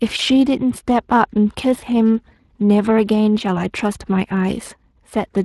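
From start to finish the speech carries a grainy, hoarse roughness. Consonants and vowel textures sound noisy rather than clean. This is plainly audible Speex codec damage. Speex is a CELP coder that rebuilds speech from a predicted vocal-tract filter and a coded excitation signal. The sound points to a setting of roughly 22 kbps, where the excitation is coded too coarsely to reproduce the original detail, and that shortfall leaves the noisy edge heard here.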